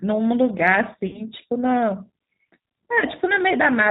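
From start to end the speech carries the sound of the G.729 codec. It rebuilds each frame from a vocal tract filter and a few pulses, so nothing above 4 kHz survives. The result is thin, rough and slightly synthetic, consistent with an 8 kbit/s stream.

From 1.07 to 1.21 s there is VoIP packet loss concealed by the speech codec. About 60 ms of audio is missing, which fits three lost 20 ms packets. The decoder repeats its last pitch and filter at falling gain, giving a stretched, fading sound. Speech stays weak briefly after.

From 3.00 to 3.04 s the same packet loss concealment recurs. Only 20 ms is lost, which points to a single packet. The gap is filled with a short stretched sound, and the following speech returns weak or distorted before it recovers.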